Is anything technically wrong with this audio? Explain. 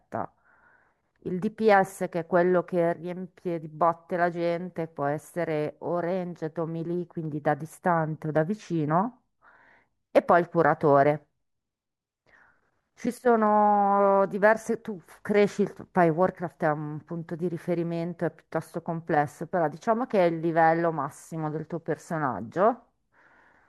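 Yes. From 18.83 s to the end of the clip, the speech shows an adaptive stream at a lower bitrate. Quality drops abruptly with no gap, which is what happens when the player switches mid-stream to a cheaper rendition because throughput fell. The treble loses its natural detail and takes on a synthetic, swishy quality, and coding artefacts become more audible. This fits a change from AAC-LC at around 96 kbit/s to HE-AAC at around 48 kbit/s, where the upper band is reconstructed rather than coded directly.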